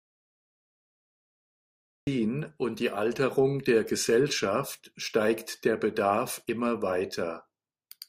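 The input signal was likely lost, through a disconnected device, a dropped link or a stray mute, while the recorder kept writing silence. That audio dropout to silence is already under way at the start and runs to 2.07 s: dead digital silence with no room tone, before speech begins abruptly.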